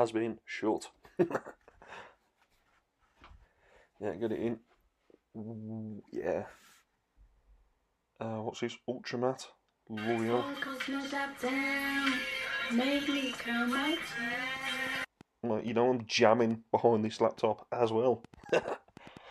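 A train of clicks runs from 14.33 s to 19.18 s: roughly twenty sharp, similar pulses arriving at an uneven pace, averaging about 4.55 per second. Their peaks reach roughly the level of the sound itself, so they stand out as a stuttering tick-tick-pop layered over the audio and carry on through any quieter moments. The likely cause is a short burst of electrical interference or a faulty connection or power supply repeatedly injecting spikes into the signal.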